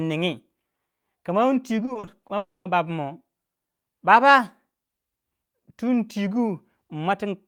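Repeated packet loss (robotic sound) runs from 1.85 to 2.31 s. Packets arrive missing or late in quick succession, and each hole, the longest about 40 ms, is papered over by extending the preceding audio. Roughly 30 percent of the stretch is patched this way, so the speech turns choppy.

A long network dropout, likely the cause, follows from 2.37 to 2.67 s. About 280 ms of speech never plays. The last sound is stretched into a brief fading buzz or hiss, then about 190 ms of near silence remains before the speech resumes with that portion gone.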